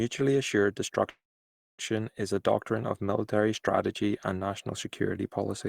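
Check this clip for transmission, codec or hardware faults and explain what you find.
There's one fault, a call audio freeze, from about 1.09 to 1.82 s, just before "is a doctrine of". The speech stalls into a brief fading buzz, then roughly 0.6 s of silence, and resumes with nothing lost, but about 0.69 s later than it should. That's likely packets held up in transit, so the jitter buffer ran dry and the receiver padded the wait.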